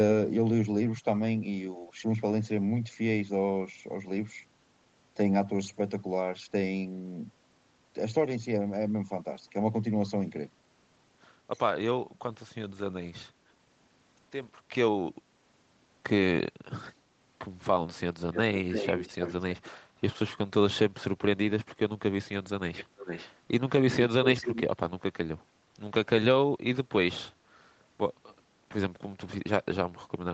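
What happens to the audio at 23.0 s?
Right around there, from 22.76 to 23.33 s, you get an echo leak: a quieter copy of the speech trailing about 444 ms behind, roughly 10 dB down. Most likely a speakerphone's echo canceller let some of its mic pickup slip back into the call.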